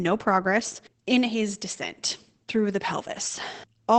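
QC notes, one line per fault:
throughout, Opus voice compression: the speech sounds muffled, hoarse and faintly robotic, with nothing above 8 kHz. Opus is running its SILK linear-prediction coder in wideband and coding the excitation coarsely, which fits a low bitrate of around 12 kbps.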